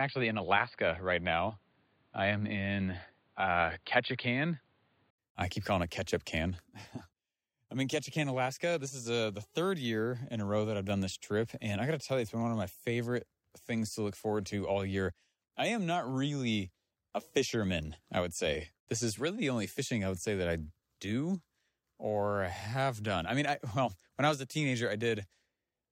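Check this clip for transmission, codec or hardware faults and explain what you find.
One fault, at the start. From 0.0 to 5.18 s the input was likely switched to a poorer device. Its narrower band leaves nothing above 4.8 kHz, so the sound is dull and boxy, with faint new noise about 40 dB down and little level change. It clears at 5.18 s, after a short silence of about 80 ms.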